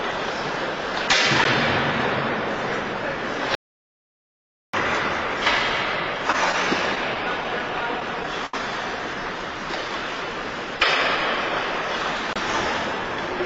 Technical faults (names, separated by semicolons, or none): block of digital silence; audio dropout to silence; short stall from a late packet; repeated stalls (stutter)